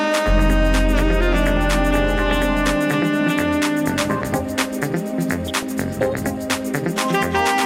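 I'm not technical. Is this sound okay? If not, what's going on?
No. From 5.47 to 5.63 s there's DAB burbling: weak digital radio reception garbles the data, giving brief blips of noise rather than silence or a clean click.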